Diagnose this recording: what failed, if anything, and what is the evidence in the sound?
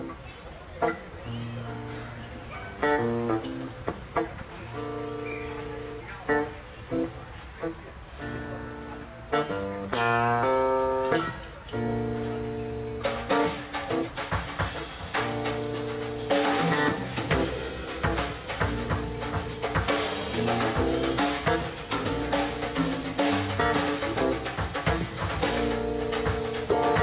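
Nothing has failed: the audio has come through a call path whose band stops at about 4 kHz, which fits G.711 mu-law narrowband telephony at 64 kbps, and no dropouts, clicks, level jumps or timing disturbances appear anywhere in it.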